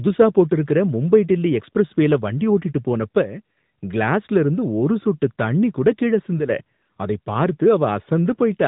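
Throughout, the speech has been squeezed through an AMR narrowband mobile codec, which samples at 8 kHz and rebuilds the voice from a vocal-tract model. Nothing above 3.8 kHz survives, and the plainly audible buzzy, synthetic edge fits a mid-rate mode near 10 kbps.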